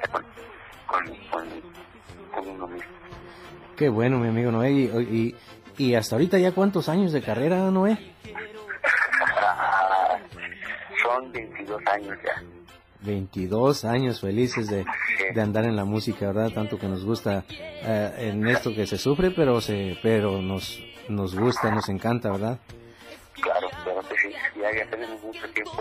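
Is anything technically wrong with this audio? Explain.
Yes. From 13.52 to 15.66 s a galloping dit-dit-dit of short buzzes at about 217 Hz sits roughly 20 dB under the sound. These are GSM signalling bursts: a nearby 2G phone's radio pulses were picked up and rectified by the audio circuit.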